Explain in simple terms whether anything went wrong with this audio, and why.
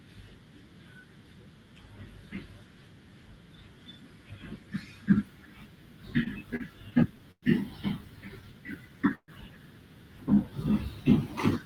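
Between 6.23 and 7.44 s, repeated stalls (stutter): network packets kept arriving late, so playback ran dry seven times, up to 110 ms each. The speech drags and stutters.

From 8.45 to 8.97 s, the jitter buffer slow-down: the receiver stretched the sound to rebuild its reserve, so speech plays at about 90% speed, same pitch.

At 9.15 to 9.30 s there is a call audio freeze: the sound hangs as a fading buzz or hiss, then 70 ms of silence. The likely cause is packets held up on the network.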